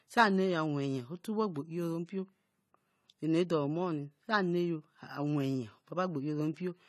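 From start to finish the speech carries plainly audible AAC compression damage, likely from a low-bitrate AAC-LC encode consistent with around 32 kbps. Nothing remains above 13.9 kHz, a flat ceiling on a spectrogram, and the thinned, patchy upper bands give a dull, smeared, fizzy sound.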